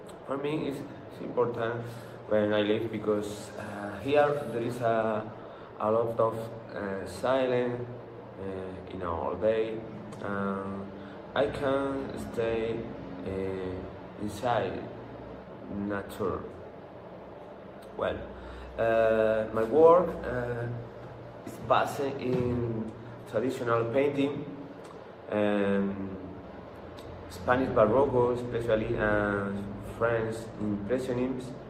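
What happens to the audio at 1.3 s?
Nothing goes wrong at 1.3 s; the audio plays through that moment intact, with no dropout, click, glitch or other fault.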